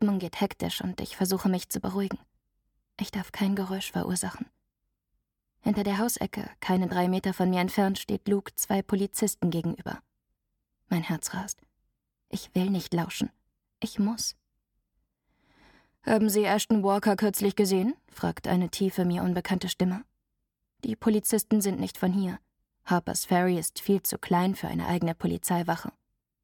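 Nothing in this audio stands out as a technical problem; there's no fault here worth flagging.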